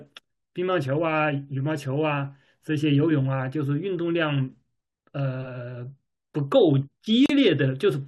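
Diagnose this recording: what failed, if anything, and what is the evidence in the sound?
Near the end of the speech, from 7.26 to 7.30 s, the sound drops out for about 36 ms: a short hole with softened edges, after which the speech resumes exactly where it left off. This is a gap at a join of encoded pieces, a codec-stage fault: separately encoded segments were spliced without trimming, so the encoder's start-up delay and the padded final frame both remain as silence at the seam.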